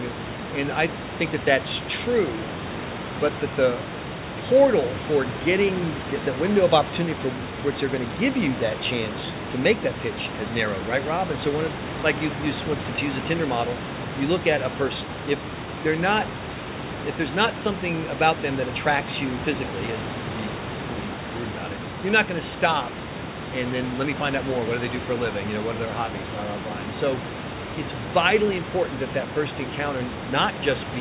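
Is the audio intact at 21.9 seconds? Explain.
Yes, the audio is intact at 21.9 seconds, with no dropout, glitch or other fault at that moment.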